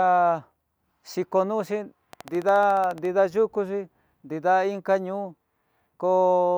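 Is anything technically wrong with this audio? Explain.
Yes. From 2.13 to 3.06 s there is a train of clicks: around 15 near-identical pulses at a steady 14.1 per second, peaking a few decibels above the speech. The likely cause is interference from nearby equipment or a faulty connection or power supply, injecting the same pulse at a fixed interval. It sounds like a rapid mechanical ticking riding over the speech. Crackle would be random in spacing and shape, and a dropout would leave gaps rather than added pops.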